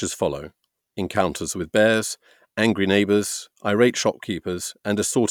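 Speech recording with no audible technical faults anywhere in the clip.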